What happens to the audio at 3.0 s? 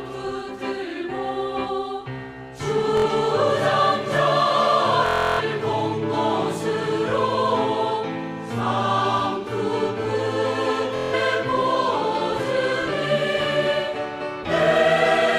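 A short buzzing stutter from 2.97 to 3.06 s, a Bluetooth stutter: about 70 ms of packets went missing, so the receiver repeated its last slice before resuming.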